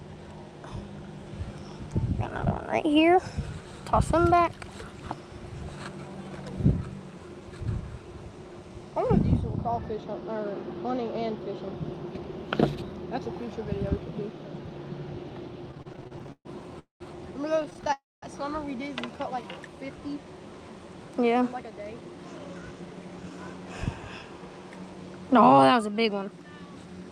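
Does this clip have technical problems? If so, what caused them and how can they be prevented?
Yes. There are four kinds of network-timing fault, all clustered between about 15.7 s and 23.3 s.

Repeated stalls (stutter) occur from 15.71 to 16.47 s and again from 17.62 to 17.90 s. In the first span the audio catches 13 times, and about 38% of it is filled-in sound (288 ms in total, longest single gap 130 ms). The second span has 8 shorter catches of at most 14 ms, totalling 81 ms, or 29% of the span. Packets arrived late or too slowly, so the jitter buffer kept draining, and the receiver stretched the last sound over each wait before resuming. Nothing is lost, but the audio drags and stammers. Prevention: reduce network jitter with QoS marking and a wired or less congested link, and give the jitter buffer a slightly higher minimum depth.

Two call audio freezes follow, from 16.79 to 17.02 s and from 17.92 to 18.24 s. 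In each, the sound is held as a fading buzz that drops to silence for 140 ms in the first and 210 ms in the second. When the audio returns it carries on from where it stopped, having been pushed later by 213 ms and 299 ms respectively. The likely cause is a run of packets held up in transit that emptied the buffer completely. Prevention: the same jitter-reduction and buffer-depth measures apply, along with fixing whatever on the path is causing the burst delays.

A jitter buffer slow-down runs from 19.07 to 19.53 s. Here the audio plays at 84% speed with unchanged pitch, so sounds are drawn out. Short repeated pitch periods add 83 ms in total as the receiver rebuilds its reserve. Prevention: a steadier network path keeps the buffer from running low, and less abrupt adaptation of the buffer target makes any stretching less audible.

A jitter buffer speed-up covers 21.34 to 23.31 s. The audio runs at about 113% speed at the same pitch and sounds hurried. 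The receiver trims roughly 0.3 s of short pitch-period pieces to shed surplus delay held in the buffer. Prevention: cut burst delivery at its source and let the buffer drain its excess more gradually.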